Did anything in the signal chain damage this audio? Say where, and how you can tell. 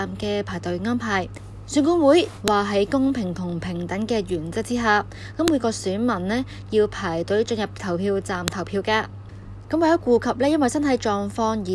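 Yes: a file header played as audio, at the storage or joining stage. Sharp clicks land at 2.48, 5.48 and 8.48 s, exactly 3 s apart, where header bytes at each piece boundary play as samples. Each click shows as a waveform spike and a thin broadband spectrogram line.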